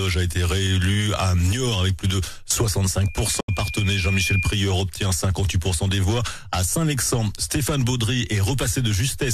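From 3.02 s a steady 2.4 kHz tone swells over about a second and a half into a squeal that ends a few decibels above the sound around it, lasting until 4.68 s. This is loudspeaker feedback squeal: a microphone was hearing its own loudspeaker, and at 2.4 kHz the loop gain passed one, so that tone kept growing.

Between 3.40 and 3.49 s the audio fades to silence within about 8 ms and then returns, leaving a gap of roughly 70 ms in the middle of the squeal. This is a digital broadcast dropout. The receiver muted after losing or rejecting data, which fits about three lost frames, and whatever was sent during the gap is gone.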